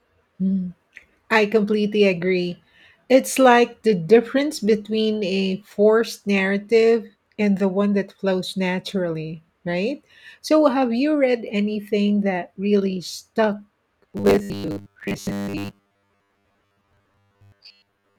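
Robotic sound from repeated short buffers runs from 14.03 s to 18.18 s, right after "anything that really stuck". The speech turns into a rigid metallic buzz at 100 Hz, likely from late-arriving audio being covered by replaying a 10 ms chunk, skipping most of the real signal.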